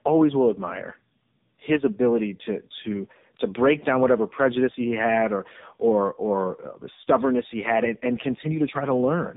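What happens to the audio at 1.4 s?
Tandem speech coding runs throughout, including 1.4 s: two AMR-NB passes, 12.2 then 7.95 kbit/s, stack their artefacts, giving rougher, warblier speech than one codec, with nothing above 3.8 kHz.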